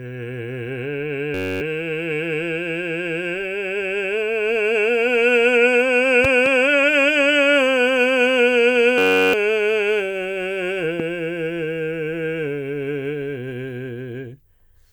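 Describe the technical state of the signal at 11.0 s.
A single sharp pop cuts through the music from 11.00 to 11.02 s, peaking around 10 dB above it while the music continues underneath. This loud pop is likely a sudden voltage pulse, from a plug, switch, static or driver glitch, added to the signal.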